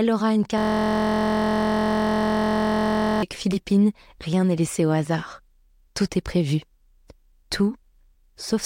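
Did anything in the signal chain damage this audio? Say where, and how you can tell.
Yes. A system hang loop at the driver or buffer stage froze the host while the hardware kept replaying one 23.22 ms ring buffer, consistent with 1024 samples. From 0.58 to 3.23 s the speech becomes a steady buzz at about 43.1 Hz.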